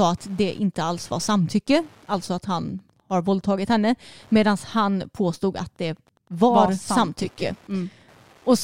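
Throughout the speech runs Wi-Fi interference: a nearby radio's beacon, sent every 102.4 ms, is rectified by the audio circuit into steady ticking about ten times a second, roughly 35 dB below the voice. A spectrogram shows evenly spaced thin vertical broadband lines.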